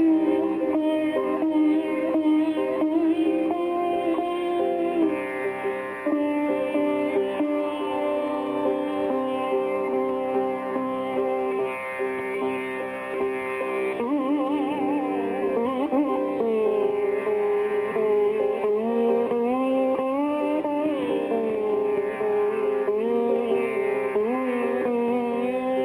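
Throughout, imaging from linear upsampling: straight-line interpolation from 12 kHz to 48 kHz filters weakly, dulling the top near 6 kHz and leaving a mirrored copy roughly 40 dB down across 6 to 12 kHz, heard as a faint metallic shimmer. A spectrogram shows that faint reflected band.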